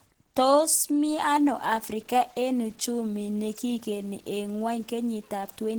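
From the very start the speech sounds muffled and hoarse, which is likely Opus compression at around 16 kbps in its hybrid mode. The damage is plainly audible.

From 1.10 s to the end, a gritty, signal-following grain rides along, roughly 35 dB down. That points to low bit depth without dither: 8-bit truncation.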